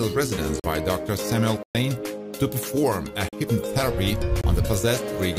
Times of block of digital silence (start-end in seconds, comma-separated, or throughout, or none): 0.60-0.64, 1.63-1.75, 3.29-3.33, 4.41-4.44